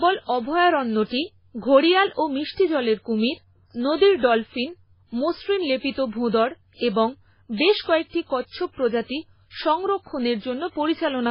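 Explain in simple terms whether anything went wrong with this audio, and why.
MP3 compression damage runs through the whole speech clip, from start to finish, and heavy MP3 encoding is the likely cause. Nothing comes through above 5.3 kHz, so s sounds turn dull, and quieter detail flickers in and out, giving a watery, swirling quality.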